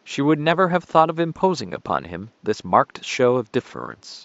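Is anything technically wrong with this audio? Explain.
No, the speech signal shows no technical faults, and the faint room noise sits about 40 dB below the voice as part of the original recording.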